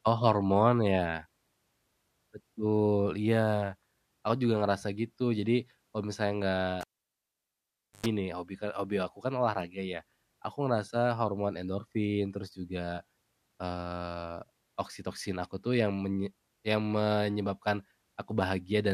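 At 6.81 s the speech is cut by a pop and about 1.2 s of near silence, the cable pulled and plugged in again, ending at 8.06 s before "nih hobi kan hobi". Unlike a plain dropout, a roughly 0.1 s burst of 50 Hz mains buzz, from the plug's tip touching first, precedes a second pop.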